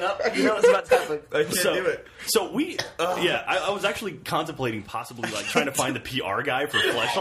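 The sound dips abruptly by about 6 dB from 0.80 to 0.89 s and from 4.85 to 5.48 s, then snaps back. The likely cause is one channel dropping out before the mono sum. Unlike a full dropout, it never goes silent, and unlike a gain ride, the steps are instant.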